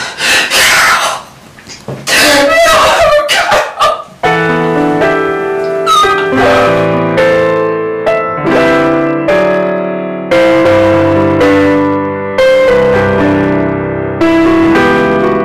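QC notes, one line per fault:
Throughout: hard clipping. The signal drives a stage about 17 dB past what it can pass, so around 15 percent of samples are cut flat at the ceiling. Those squared-off peaks add high harmonics, heard as harsh fuzz on every loud passage.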